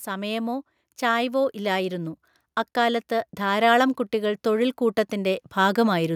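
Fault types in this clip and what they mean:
Automatic gain rising: the gain control judged the speech input too quiet and turned itself up, so the speech and the background noise swell together. It happens twice here, from 0.05 to 2.2 s by about 5 dB, then from 2.74 to 6.11 s by about 6 dB. Unlike a sudden level step or a gate opening, each climb is smooth and takes seconds, and the noise floor rises with the speech, not just the speech.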